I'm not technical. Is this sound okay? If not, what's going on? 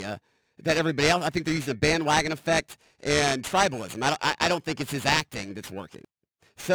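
No. From start to finish the speech has periodic clock jitter. The timing clock inside the recording or playback equipment is being nudged back and forth at a steady rate of around 2 kHz. That wobble adds extra tones just above and below everything in the speech, so the voice takes on a rough, metallic edge, strongest on hissy sounds. Unlike a steady hum or whine, it vanishes in pauses.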